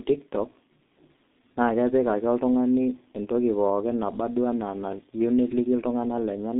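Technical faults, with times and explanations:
Throughout: G.723.1 codec. The speech is muffled and hoarse, with smeared consonants, as heavy low-rate coding rebuilds each 30 ms frame from a coarse, slowly updated voice model; the damage fits a bitrate near 6.3 kbit/s. The band runs only from about 200 Hz to 3.7 kHz. On a spectrogram, energy stops sharply at about 3.8 kHz with nothing above, harmonics look blurred and blocky, and the waveform's consonant onsets lose their sharp edges.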